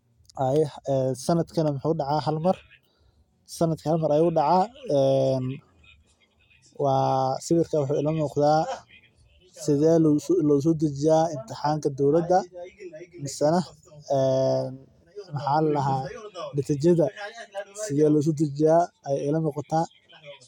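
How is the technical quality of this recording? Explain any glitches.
No audible glitches or faults.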